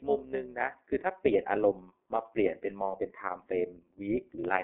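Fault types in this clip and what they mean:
iLBC codec: narrowband speech coding in 30 ms frames, likely around 13.33 kbps; nothing above 3.6 kHz survives, and the speech sounds plainly rough and synthetic.
overlap-add ripple: frames rejoined with mismatched overlap gain, so the level pulses by about 6 dB at roughly 200 Hz, giving a metallic buzz throughout.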